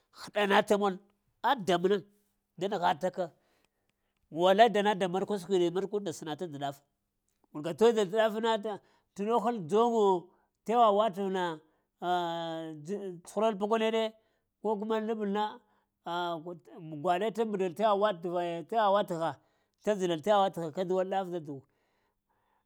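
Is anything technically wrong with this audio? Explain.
Yes. There is a block size mismatch (truncated) from 11.14 to 11.96 s. One stage in the chain writes audio in longer blocks than the next stage reads, so the tail of each block is discarded. The regular cut at every block boundary produces a buzz at about 46.9 Hz, which fits 1024-sample blocks. In this clip the tempo stays at about 1.0 times normal speed.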